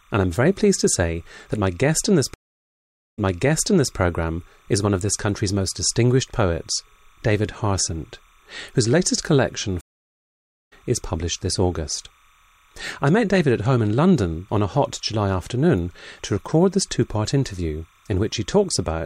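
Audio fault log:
throughout: timecode bleed. There's a faint chirpy warble sitting around 35 dB under the speech, flipping between roughly 1 kHz and 2 kHz. That's linear timecode leaking in from a nearby track or cable, and its rhythm fits 29.97 fps code.
2.34–3.96 s and 9.81–10.73 s: stream reconnect, twice. The connection dropped and the audio went silent for 0.81 s and 0.86 s. A fresh decoder then picked up mid-stream. The first time it jumps back 0.81 s, replaying a resent burst. The second time it skips ahead roughly a second, live-style.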